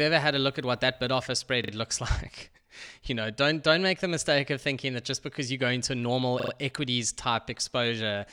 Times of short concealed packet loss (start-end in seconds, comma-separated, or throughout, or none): none